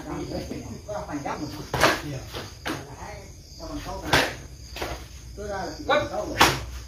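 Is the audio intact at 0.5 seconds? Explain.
No. At 0.51 s there is a dropped buffer (overrun). About 70 ms of audio is missing. The sound jumps straight ahead with no silence. The likely cause is samples being overwritten before the program collected them.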